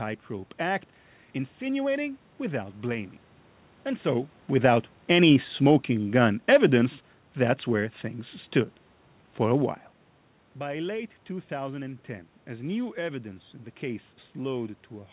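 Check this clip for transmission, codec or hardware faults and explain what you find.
One fault stands out: the automatic gain is falling between 4.50 and 6.97 s. The call path itself can be heard in that nothing reaches above 4 kHz, which fits narrowband G.711 A-law at 64 kbps.

Across those 2.5 seconds, the automatic gain control judges the input too loud or its background noise too strong and gradually pulls its gain down by about 4 dB. Speech and room noise sink together, so the level loss is not just in the talker. On a waveform, the envelope tapers steadily over that span. On a spectrogram, every band dims evenly, with the background floor dropping in step with the speech.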